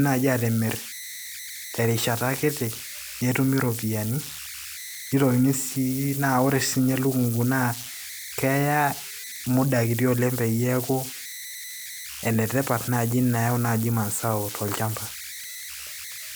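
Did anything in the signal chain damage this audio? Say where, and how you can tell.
Yes, at the converter. Converter idle tones, a tone around 2 kHz, run throughout at about -12 dB. An undithered delta-sigma modulator locks into repeating bit patterns.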